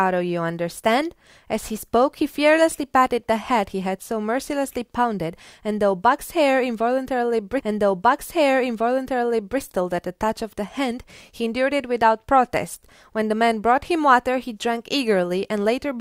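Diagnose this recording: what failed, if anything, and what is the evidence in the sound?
At 7.59 s the speech jumps back and replays the previous two seconds, running through to 9.59 s, with a small blip at the seam where the playback jumps. This is a stream segment repeated, a playback-stage fault: the player fetched or queued the same chunk of the stream twice, so an extra 2 s of programme is inserted and everything after it arrives late by that amount.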